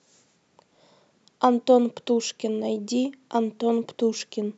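No technical faults can be heard anywhere in the speech. There is nothing here that needs a time stamp or an explanation.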